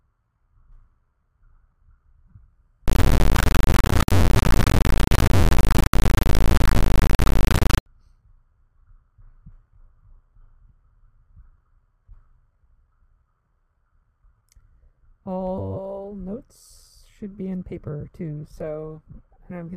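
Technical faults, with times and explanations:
2.86 to 7.86 s, integer read as float: a harsh, extremely loud square-wave buzz that falls silent in the quietest moments, which fits 32-bit integer samples decoded as 32-bit floats. Unlike plain clipping, no original waveform survives, only jumps between zero and the limit.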